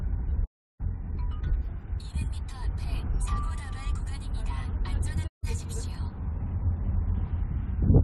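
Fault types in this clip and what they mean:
digital broadcast dropout: The receiver stopped getting decodable frames and muted its output. The audio fades out over about 20 ms and goes silent from 0.44 to 0.81 s, and again from 5.26 to 5.45 s. Whatever was transmitted during those gaps is lost.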